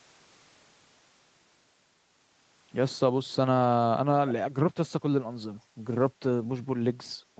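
At 4.28 to 4.32 s a brief echo leak can be heard. A faint, delayed copy of the speech surfaces for about 40 ms, trailing the original by about 224 ms. It sits roughly 15 dB below the speech. The likely cause is a far-end loudspeaker whose echo canceller let a scrap of the returning signal slip back into the call.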